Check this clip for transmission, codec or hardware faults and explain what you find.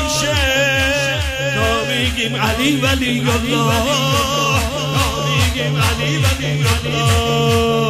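Nothing here points to a transmission, codec or hardware problem, so there's no fault to report.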